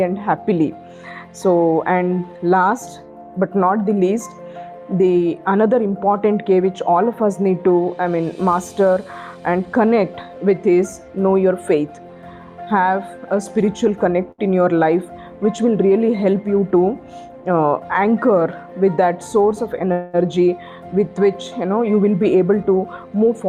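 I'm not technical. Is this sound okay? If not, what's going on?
No. At 14.31 s a short stall from a late packet occurs: one piece of data arrived late, so the receiver held the last sound for about 70 ms until it caught up. You hear a brief stretched moment, and the audio then carries on with nothing missing.

Twice the receiver had built up too much waiting audio and performed a jitter buffer speed-up, snipping out tiny slices to catch up. From 16.33 to 16.83 s the sound runs about 11% fast, and from 22.04 to 23.43 s about 9% fast. The pitch stays the same, but it sounds hurried.

From 19.92 to 20.16 s there is a call audio freeze. The sound hangs on itself as a fading buzz or hiss for about 0.2 s, with no silence, then resumes where it stopped. The likely cause is data held up on its way, leaving the receiver nothing new to play.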